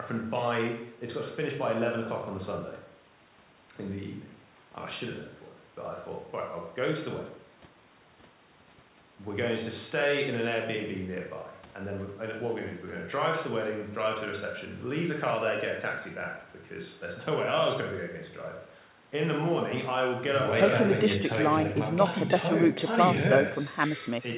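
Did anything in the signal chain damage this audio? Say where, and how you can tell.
No, nothing in the chain damaged this speech; it has the narrowband character of a working call path, with nothing above 4 kHz, which fits a G.711 mu-law link at 64 kbps.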